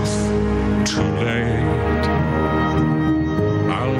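Gain pumping runs throughout: the gain ducks by about 10 dB under loud sounds, likely a fast limiter fighting excessive input gain, unlike a gate's abrupt cutoff.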